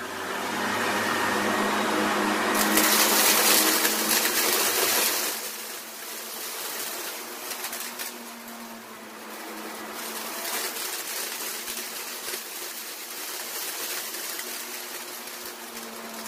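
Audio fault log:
5.01–5.53 s, zipper noise: the level drops by roughly 10 dB over about half a second, but in 1 dB steps instead of a smooth glide, about 50 steps a second. Each jump puts a tiny click into the waveform, and at that rate the clicks blur into a quick ticking zip riding on the sound until the fade settles.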